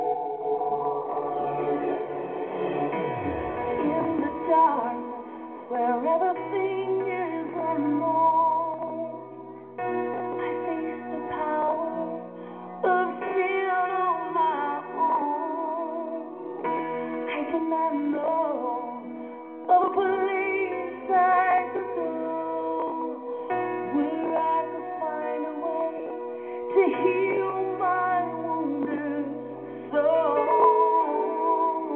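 No technical faults are audible.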